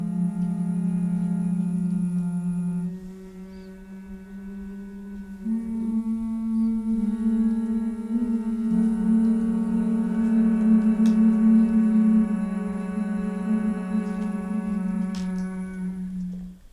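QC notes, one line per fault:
No faults were heard; the signal plays continuously with no audible interruptions or distortion.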